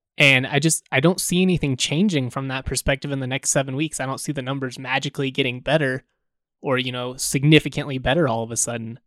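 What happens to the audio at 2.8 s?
At 2.8 s the speech continues without interruption, with no dropout, click, distortion or other fault audible at that point.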